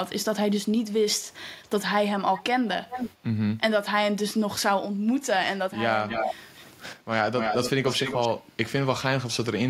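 A loudspeaker-end echo canceller likely failed to remove what its microphone picked up, sending delayed speech back as echo leak at 1.18, 1.63, 2.36, 2.89, 6.08, 6.54, 6.95 and 7.38 to 8.29 s. The echo lags 271 to 390 ms and ranges from faint scraps to copies nearly as loud as the speech.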